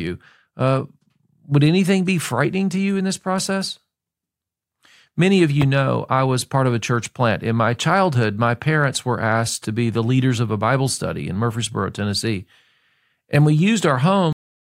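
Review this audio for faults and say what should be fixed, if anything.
The speech has a cut-off end at 14.33 s: the final buffers were never written, so the sound halts mid-syllable and drops straight to digital silence. The waveform flattens to a flat silent line, and the spectrogram ends in a sharp vertical edge with no decay tail. Flushing and draining all pending buffers before closing the file or stream would prevent it.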